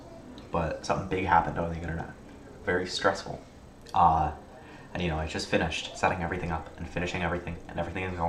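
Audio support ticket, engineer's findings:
No faults found on listening: the signal shows no dropouts, clicks, distortion, level jumps or timing errors anywhere in the clip.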